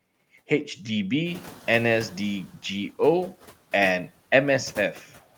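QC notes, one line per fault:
1.26–2.44 s, noise suppressor catching up: room noise rises by about 13 dB near the one-and-a-half-second mark. The suppressor's estimate lags, so the noise first passes with less reduction, then sinks by about 6 dB over 1.18 s. The spectrogram shows a noise floor brightening, then fading.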